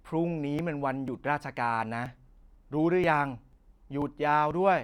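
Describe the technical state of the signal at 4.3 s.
At 4.3 s the clip sits inside a run of periodic USB or driver dropouts spanning 0.10 to 4.51 s. Something is stalling the USB bus or audio driver every 0.49 s, and each stall drops roughly 10 ms of samples outright, with no silence inserted, so the speech jumps ahead. Around ten of these evenly spaced gaps occur, each heard as a small tick or pop in the speech while signal is present.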